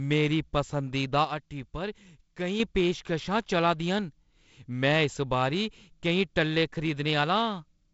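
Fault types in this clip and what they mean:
Sudden gain jump: at 1.25 s the speech and its background noise drop together by about 6 dB in a single step, with no fade at all, and at 2.60 s both snap back up just as abruptly to the earlier level. The likely cause is a digital gain setting applied from one sample to the next without a ramp.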